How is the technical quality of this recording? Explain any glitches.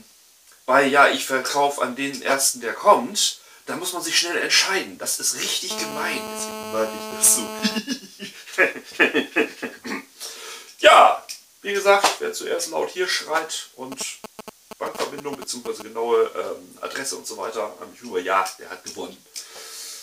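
The recording is marred by two episodes of mobile-phone interference, one continuous and one intermittent.

From 5.71 to 7.78 s there is GSM phone buzz: a hard, raspy tone at about 217 Hz, rich in harmonics, sitting about 10 dB below the wanted sound. A 2G handset in call mode was transmitting radio bursts 217 times a second, and the audio circuitry rectified them into audible pulses. The buzz is steady and has nothing to do with the material. Its raspy 217 Hz character distinguishes it from mains hum, which is smoother and sits at 50 or 60 Hz.

From 13.92 to 15.82 s GSM signalling bursts appear: a galloping dit-dit-dit of brief 217 Hz buzzes at roughly the same strength as the earlier interference. This time the phone sent only short groups of bursts, such as the exchanges before a call or text arrives, and the circuitry rectified each group. The stop-start rhythm is what sets it apart from the unbroken buzz of an active call.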